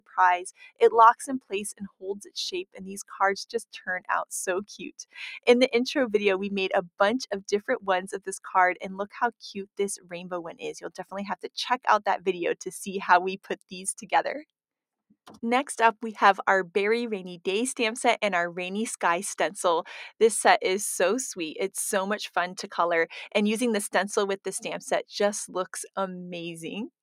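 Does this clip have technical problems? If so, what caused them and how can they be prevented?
Yes. A noise suppressor applied to music or sounds is active throughout. The processor was designed for speech, so it treats steady tones, ambience and decay as noise and keeps pulling the level down and letting it back up by about 5 dB. On the waveform the envelope breathes unevenly. A spectrogram shows sustained partials and reverb tails thinning and flickering while onsets stay intact. To prevent it, disable speech noise suppression for music or general audio capture.

The sound is cut by the noise suppressor at 0.51 to 0.82 s, 1.21 to 1.53 s, 1.73 to 2.36 s and 4.83 to 5.18 s, with drops of about 21 dB. Smaller cuts follow at 9.97 to 10.13 s (about 14 dB), 10.86 to 11.13 s (about 16 dB) and 13.38 to 13.73 s (about 15 dB). Each lasts a few tenths of a second. The held or fading material sinks, which shows as waveform notches and dark gaps across the spectrogram. 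Preventing it also means turning off the suppressor or using a music mode.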